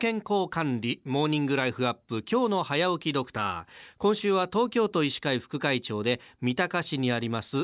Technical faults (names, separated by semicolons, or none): none